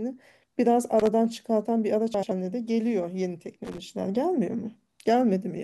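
At 1.00 to 1.07 s, loose connector crackle breaks the speech into a scratchy burst. A worn contact is making and breaking. From 2.14 to 2.32 s, frames out of order garble the sound. Two blocks of about 85 ms play swapped. The same crackle returns from 3.64 to 3.78 s.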